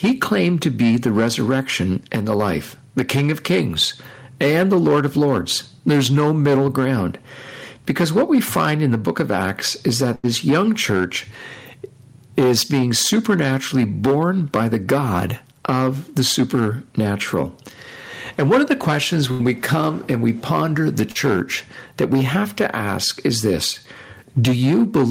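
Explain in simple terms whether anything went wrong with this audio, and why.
Yes, a few things went wrong. The first is hard clipping, which runs through the whole recording. The speech was pushed well past what the recording chain could handle, so the loudest moments got their tops sliced off flat. That flattening adds a gritty, buzzy edge you can hear on the louder syllables, and a small but steady share of the sound is affected, so the harshness keeps coming back.

Alongside that there's gain pumping, also present throughout. The whole thing feels squashed, with loud and quiet parts crammed close together. The likely cause is a microphone level set far too high, with an automatic limiter or compressor yanking it back down on every loud sound.

Next, there are two bursts of packet loss, from about 10.15 to 10.25 s and from about 19.31 to 19.41 s. Each time, roughly 80 ms of the speech never arrived. 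The receiver papered over the hole by stretching out the last bit of sound it had and letting it fade, which comes across as a brief held buzz or hiss. Then the speech picks up a little further on, with that slice gone.

Finally, there's one case of short concealed packet loss, from about 21.11 to 21.17 s. This time only around 40 ms went missing. The receiver filled it in smoothly and blended back into the real audio, so you just get a quick smear or wobble, and a short consonant could easily slip away there.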